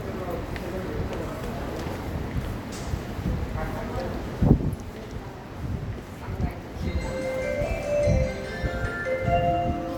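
No faults can be heard anywhere in this recording of sounds.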